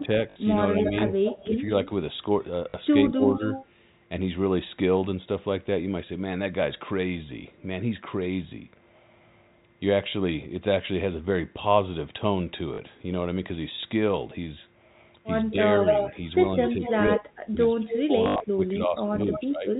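A speech recording over a telephone-style path (the band tops out around 4 kHz, which fits G.711 coding) with three kinds of trouble. Packet loss with last packet repeated shows up at 0.3 s (about 60 ms), 2.7 s (40 ms), 12.74 s (40 ms), and as a scattered burst from 18.24 to 18.4 s with the longest run about 80 ms. Each one is a short robotic stutter, because the receiver keeps replaying the last chunk and the repeats don't line up with the pitch. The chunk sizes fit 20 ms packets, so the longer runs buzz at about 50 Hz. There's also an echo leak, a copy of the voice coming back 232 ms late, from 0.84 to 1.89 s and 3.1 to 3.66 s at about 10 dB under the main speech, then from 15.5 to 19.42 s at roughly the same level as the speech. That's likely a loudspeaker on the far end whose echo canceller isn't catching everything its mic picks up, so the residue gets sent back. Finally, the talker gets pushed down in two stretches, which sounds like speech suppressed in double talk. 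From 0 to 1.56 s there are dips of around 10 dB, adding up to under half a second. From 15.51 to 19.68 s it gets much worse, with drops as deep as about 30 dB adding up to roughly 2 s. The likely cause is an echo canceller that can't tell live talk from echo while both sides speak at once, so it turns everything down.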